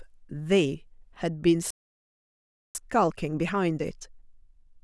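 At 1.70 s the speech cuts off mid-flow and the output goes completely silent until 2.75 s, a gap of about 1.05 s. This is a playback stall. The player most likely ran short of buffered data or had its output thread held up, so nothing reached the output. In the waveform this appears as a flat line with an abrupt edge at each end. On a spectrogram it is a vertical band of empty black across all frequencies, bounded by sharp onsets where the sound stops and resumes.

From 2.75 s to the end of the clip comes time-compressed catch-up. The player is draining its backlog by cutting out short slices and cross-fading the joins, which runs the speech at about 1.15 times normal speed while keeping the pitch unchanged. It sounds hurried. On a spectrogram the harmonics stay at the same heights but syllables sit closer together. Small smeared seams mark the cross-fades. The waveform shows denser envelopes with shortened pauses.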